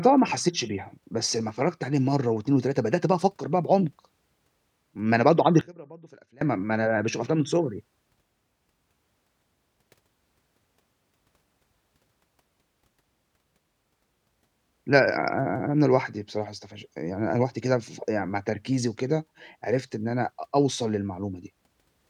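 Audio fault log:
5.61–6.41 s, one channel inverted: for these 0.8 s the speech collapses by about 27 dB to a faint residue. The likely cause is one stereo side flipping polarity, so the centred material common to both channels cancels when they are combined and only their small difference survives. Unlike a dropout, sound never falls to true silence, and unlike a plain gain dip, the weakening is uneven, removing the centre.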